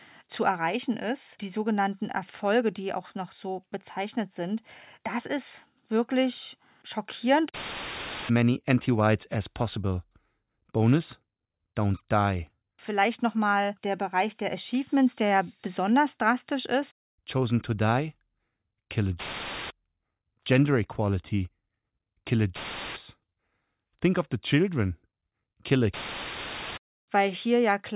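Nothing in the recording stood out as a technical problem on listening.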